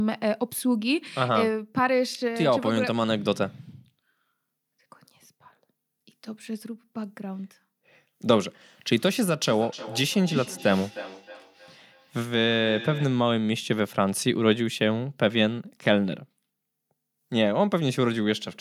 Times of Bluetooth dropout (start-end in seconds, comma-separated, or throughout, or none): none